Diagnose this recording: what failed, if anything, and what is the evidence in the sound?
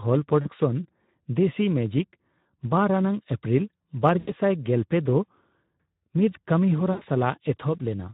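The codec stage is the weak point: the speech was carried through Speex at a low quality setting, and the sound suggests a bitrate of around 11 kbps. With so few bits left for the excitation signal, the encoder can only roughly rebuild the voice, and the damage is plainly audible throughout. Voices come out hoarse and grainy with a noisy edge.

On top of that, the network dropped packets, and the Speex decoder's loss concealment filled the gaps. There are three dropouts: 0.41–0.51 s, about 40 ms lost, which fits two 20 ms frames; 4.19–4.33 s, about 80 ms; and 6.91–7.05 s, about 100 ms. In each one the decoder repeats its last pitch and filter at falling gain, so the speech smears into a buzzy tone or coloured noise that fades. The voice then stays weak and distorted for a short while as the decoder's state recovers.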